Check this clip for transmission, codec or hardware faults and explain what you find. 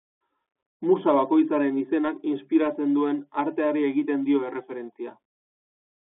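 The speech carries one fault throughout, the Bluetooth CVSD headset codec, present from start to finish. CVSD encodes each sample as a single up-or-down bit and adapts its step size, and the result fits a 64 kbps CVSD link. The audible band runs only from about 250 Hz to 3.5 kHz, so the speech sounds thin and boxy. Plainly audible codec damage adds scratchy sibilants, distortion where fast high sounds outrun the step, and a granular hiss beneath the speech.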